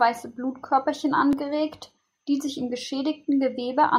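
A dropped buffer (overrun) occurs at 1.33 s in this speech, heard as a slight jump forward in the sound. The likely cause is the recording software failing to collect a buffer before the hardware overwrote it, so a few milliseconds vanished and the surrounding audio was spliced directly together.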